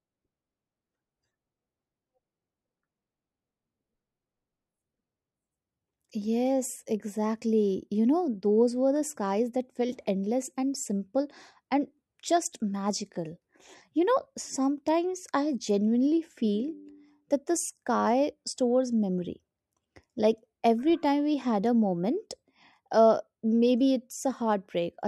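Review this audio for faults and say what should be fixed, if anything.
Dropped samples at 24.31 s: a single sharp click cuts through the speech there. It is likely caused by a fraction of a millisecond of audio going missing from the stream, so the waveform jumps straight to a later value and leaves a brief discontinuity. To prevent it, give the capture or transfer path enough buffering that no samples are skipped under load.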